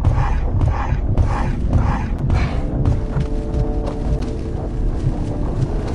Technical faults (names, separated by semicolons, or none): gap between stream segments